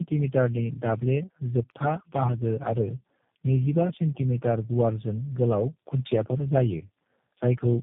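Across the whole clip the speech carries tandem speech coding: it sounds like four speech codecs in a row, something like AMR-NB, CVSD and G.729A, each re-encoding the last one's already damaged output. Every pass adds its own smearing, so the roughness stacks up into a muffled, warbly, gritty quality beyond anything a single codec would give. Nothing reaches above 3.7 kHz either, so it has that dull narrowband edge.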